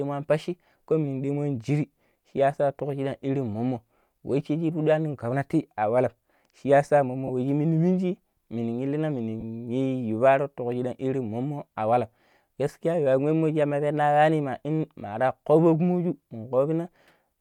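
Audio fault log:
7.27–7.30 s and 9.40–9.43 s: lost LE Audio frames. About 22 ms drops out each time, which fits three short LC3 frames. The decoder fills the gap by reusing the last spectrum with random signs, so the speech briefly smears into noise.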